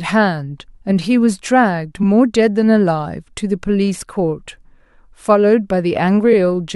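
At 2.02 to 2.05 s, and again at 6.32 to 6.34 s, there are repeated frames. A 23.2 ms block plays twice. That fits a single compressed frame being duplicated. Each repeat is a brief stutter and adds 23.2 ms to the speech.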